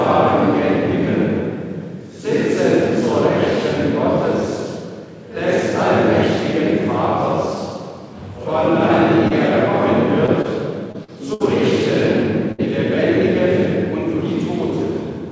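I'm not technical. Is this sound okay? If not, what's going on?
No. There are small dropouts in the sound, in the second half of the clip.

The first kind is short concealed packet loss, at 9.28, 10.26, 10.42, 10.92 and 11.04 seconds. Tiny pieces of the call arrived too late. The receiver patched each hole by stretching the sound just before it. You hear a quick smear or wobble, each lasting about 20 ms. The one at 11.04 is about twice as long.

The second kind is a burst of packet loss, from 11.34 to 11.42 and from 12.52 to 12.60 seconds. Here a larger chunk, about 60 ms, went missing. The gap was filled with a fading copy of the previous sound. Then the audio jumps ahead, and that bit is simply gone.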